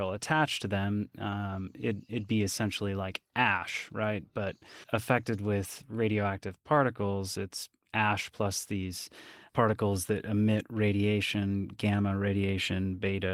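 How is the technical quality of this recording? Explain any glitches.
No technical faults can be heard in the recording: the speech has passed through Opus voice compression, which sounds consistent with a moderate voice bitrate in its hybrid full-band mode and leaves only light coding traces in the sound.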